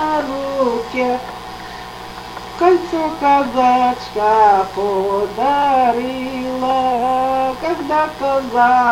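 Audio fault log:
Throughout, mains buzz: a steady, raspy 60 Hz buzz sitting roughly 20 dB under the sound. Something like a dimmer or a rectifier is spiking twice per mains cycle, so harmonics stack up into the kilohertz range and give it that edge.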